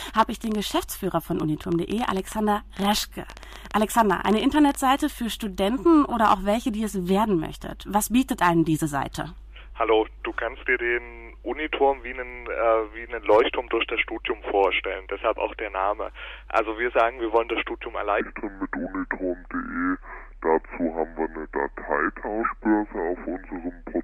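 From 0.02 s to 4.76 s there is a train of clicks: around fifty sharp pops at roughly 11 per second, unevenly spaced, each peaking a few decibels above the surrounding sound. They tick audibly over everything, including any gaps. On a waveform they are narrow spikes standing above the envelope; on a spectrogram they are thin vertical lines spanning the whole frequency range. The likely cause is interference from nearby equipment or a faulty connection or power supply.

From 18.21 s to the end, the section plays at the wrong speed, at 0.717 times normal. Pitch and tempo fall together, by roughly five semitones, so everything sounds deep, dragged and sluggish from that point on. On a spectrogram, harmonics and formant bands shift abruptly downward and spread farther apart in time at 18.21 s. On the waveform, events stretch longer. The likely cause is an editor or player applying the wrong clock or sample rate to that section.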